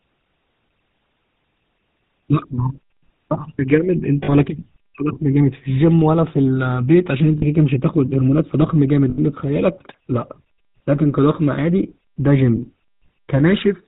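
From the first second the speech has the gritty, buzzy texture of the GSM full-rate codec, and the damage is plainly audible. The codec rebuilds each voice from a vocal-tract model driven by sparse, evenly spaced pulses, so the natural excitation is replaced with something coarse and granular. Nothing comes through above 4 kHz, which leaves the sound dull and boxed-in. It all fits a 13 kbps phone-grade link.

On top of that there are four moments of lost GSM frames, where the decoder had nothing valid and kept replaying the last good frame. Around 4.24 to 4.35 s and 7.38 to 7.43 s you get short metallic smears of roughly 40 ms each. The one at 9.1 to 9.19 s is the longest, about 80 ms. At 12.56 s there's a brief glitch of about 20 ms.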